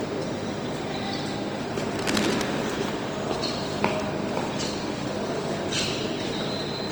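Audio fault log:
Throughout: low-bitrate audio saved at a high bitrate. The file is at a generous MP3 rate, but the detail isn't there to match. The first encode's artefacts are still there and the high rate doesn't clean them up, which points to a source that likely went through something like Opus at around 32 kbit/s before being re-saved at roughly 253 kbit/s. Top end runs out at about 20.2 kHz. The second encode just carries the first one's damage forward and adds little of its own.
1.93–2.47 s: cable scratch noise. For about half a second there's a ragged burst of scratching and rustling laid over the sound, uneven and dense rather than a clean click. It sits only a little below the sound itself, so it's hard to miss. That jittery texture is what you get when contact resistance jumps around quickly, most likely from a worn cable, connector or control being moved during the take.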